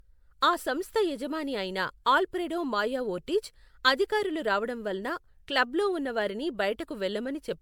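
Throughout, the speech has a swirly, hollow, smeared quality, with blurred consonant onsets and content reaching up to about 19.9 kHz. This is generation loss, likely from MP3 encoding repeated around ten times, consistent with 128 kbit/s.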